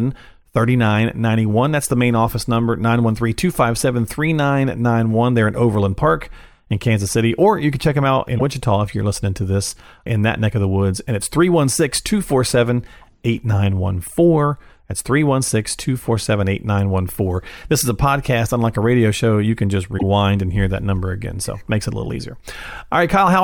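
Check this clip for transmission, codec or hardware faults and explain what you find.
The speech has two faults, both damaged data in a compressed stream, at 8.35–8.42 s and 19.95–20.03 s. Corrupted bytes make the decoder misread frames and lose sync until it finds the next valid header, producing a brief chirp or blip lasting under a tenth of a second each time.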